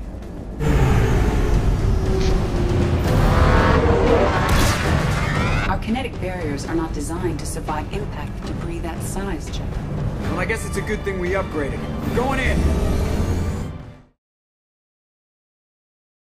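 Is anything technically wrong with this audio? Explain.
No, nothing is technically wrong: there is a smooth fade-out, like an editor's, that begins at roughly 12.5 s and finishes at 14.19 s with no click or hard edge.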